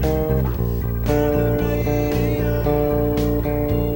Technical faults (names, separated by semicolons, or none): video or display buzz